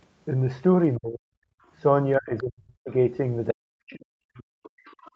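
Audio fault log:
0.98–1.28 s, 2.18–2.91 s, 3.52–4.82 s: speech suppressed in double talk. The speech sinks deeply, by around 40 dB, likely because the echo canceller clamped down while both ends talked at once.
1.56–1.66 s: background gated by the echo canceller. The room sound briefly drops out, by about 25 dB, as the canceller attenuates the mic during loudspeaker playback, then recovers.
2.37–2.43 s, 3.48–3.52 s, 4.85–5.11 s: other side's voice leaking through. Faint scraps of a second voice, well below the main speech, most likely residual loudspeaker echo the canceller didn't fully remove.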